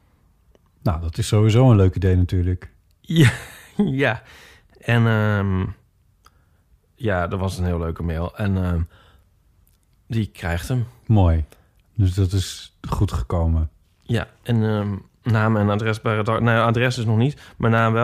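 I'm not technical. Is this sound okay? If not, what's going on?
No. From about 0.9 s to 17.8 s there's a click every 0.84 s, around twenty of them, under the speech. That's clock drift buffer slips: two devices likely running at slightly different speeds, so every so often a handful of samples gets dropped or repeated.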